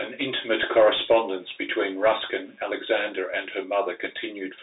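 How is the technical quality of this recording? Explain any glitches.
Two faults run through the whole speech clip: a faint computer activity buzz and the narrowband damage of a Bluetooth CVSD headset codec.

Computer activity noise is present throughout as a low buzzing pulse repeating around a hundred times a second, roughly 40 dB below the speech. Processor or peripheral load is shifting the audio circuit's shared ground.

The Bluetooth CVSD headset codec damage is plainly audible from start to finish. The speech is confined to roughly 300 Hz to 3.7 kHz, with nothing above 3.8 kHz, which fits a 64 kbit/s CVSD link. Its one-bit adaptive steps lag fast transients, so sibilants sound scratchy and a granular hiss sits under the speech.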